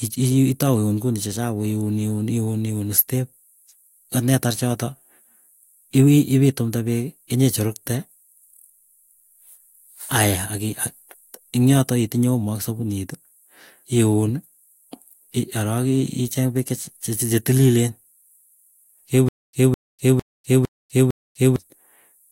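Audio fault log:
19.29–21.56 s, stutter with silent gaps: right near the end the speech hiccups, a 208 ms snippet repeating five times, each followed by about 247 ms of dead digital silence, so it ticks along on an even 455 ms cycle. That's most likely the player or stream stalling, replaying its last chunk on each retry and then running dry, and whatever should have played across those two-odd seconds is simply gone.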